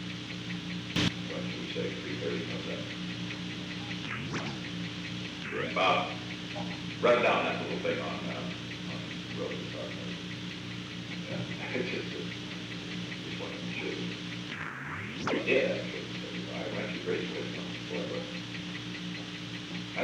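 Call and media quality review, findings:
Sudden gain jump, 0.96 to 1.08 s. Likely a digital gain stage applying a new setting between adjacent samples with no ramp. Level leaps about 14 dB at once, background noise rising with the sound, then falls back at 1.08 s.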